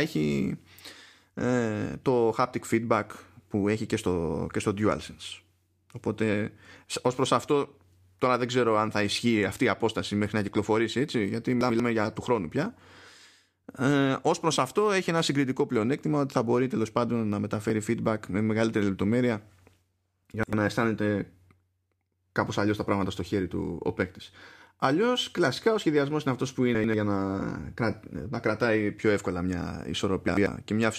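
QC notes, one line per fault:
11.61–11.80 s, 20.34–20.53 s, 26.75–26.94 s, 30.28–30.47 s: chunks out of order. In each span two adjacent blocks of about 93 ms play swapped, so the speech briefly jumbles at three hard joins. These show as vertical broadband lines on a spectrogram and as waveform steps.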